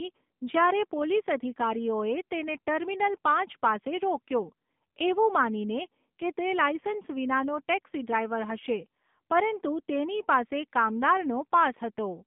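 Throughout, the speech passes through an AMR narrowband mobile codec at a low rate, consistent with the 7.4 kbps mode. The vocal-tract model and sparse pulses make the voice buzzy and synthetic, squeezed into a 150 Hz to 3.6 kHz band with nothing above it.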